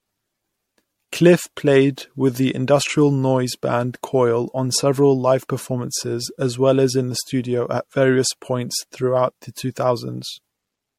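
A speech recording with generation loss throughout. It sounds swirly, smeared and hollow, consonant attacks are blurred, and nothing reaches above 16.5 kHz. The likely cause is repeated lossy re-encoding, around four passes, and the character points to MP3 at about 64 kbit/s.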